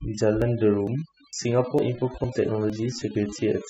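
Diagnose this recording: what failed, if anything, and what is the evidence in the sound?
The noise reduction stage failed from overdone noise removal. Across the whole clip the background sits at near silence broken by twinkling specks. The suppressor was set too hard: bands near its noise estimate are pulled far down or switched off, taking the quiet parts of the speech with them. Low-bitrate codec artefacts would leave some background texture instead of this gated, specked emptiness.

The buffer stage shows audio missing between chunks. Skips occur at 0.42, 0.87, 1.33, 1.79, 2.24, 2.70 and 3.15 s, each losing about 40 ms and spliced shut with no silence. The even spacing points to 0.5 s chunks, with roughly 40 ms likely lost at each handover between chunks. Network packet loss would fall at irregular times and leave gaps or concealment rather than evenly spaced joins.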